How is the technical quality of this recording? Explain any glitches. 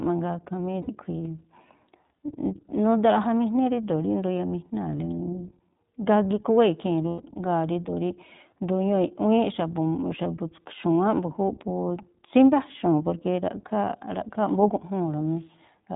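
Quality is limited by narrowband coding and marred by two brief dropouts.

Throughout, the speech sounds muffled, slightly rough and synthetic, with nothing above 4 kHz. That is the iLBC codec, which codes each short frame independently and discards high frequencies; the damage is plainly audible, consistent with its 15.2 kbps, 20 ms frame mode.

At 0.82–0.89 s and 7.08–7.23 s the speech turns into a held, buzzy, breathy vowel before recovering almost immediately. These are lost iLBC frames: the decoder repeats the last pitch cycle with noise, fading it over the longer second gap, which fits losses of roughly 60 ms and 120 ms.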